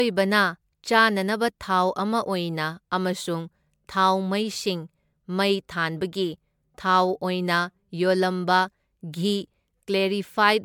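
A speech clip with generation loss throughout: swirly, hollow and smeared, with blurred attacks, likely from about seven MP3 passes, fitting 128 kbit/s, content reaching 20.1 kHz.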